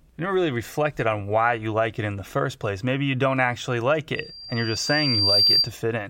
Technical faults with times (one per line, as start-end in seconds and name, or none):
4.15-5.72 loudspeaker feedback squeal